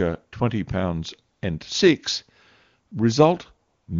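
At 1.33 to 1.41 s, 2.87 to 2.91 s and 3.67 to 3.87 s you get AMR comfort noise: the phone decided nobody was talking and stopped sending speech for 80, 40 and then 200 ms. The real background drops out and a smooth, steady synthetic hiss switches in.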